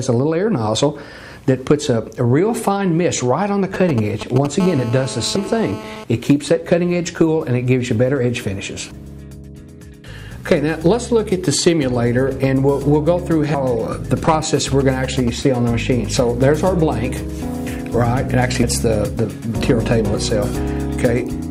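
From 3.74 to 4.47 s there's a galloping dit-dit-dit of short 217 Hz buzzes, nearly as loud as the sound itself. Those are GSM signalling bursts: a 2G phone nearby is chattering to the network, and the audio circuit rectifies its radio pulses.

Right after, from 4.60 to 6.04 s, the phone settles into a call and you get the steady GSM phone buzz. It's a hard, raspy 217 Hz tone full of harmonics, about 13 dB down, and it has nothing to do with the audio underneath it.

Compressed frames are skipped at 5.35, 8.91, 13.54 and 18.63 s. Each time the audio jumps ahead, losing roughly a tenth to a sixth of a second, which fits a few dropped 24 ms frames.

The signalling bursts return from 14.25 to 15.29 s with the same galloping buzz pattern, this time a bit quieter.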